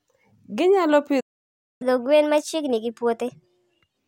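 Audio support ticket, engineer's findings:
Playback stall, 1.20 to 1.82 s: speech cuts to silence mid-flow for about 0.6 s, then resumes. Output path starved; likely the player's buffer ran dry or its audio thread was blocked, so nothing reached the device until it recovered. Gap is a hard dropout, not a fade.

Catch-up at higher speed, 1.82 to 3.99 s: speech runs fast and raised in pitch right after the stall, at 1.25x speed, pitch up roughly four semitones. Player resampling its backlog to recover the lost time. Speed and pitch shift together, then return to normal at 3.99 s.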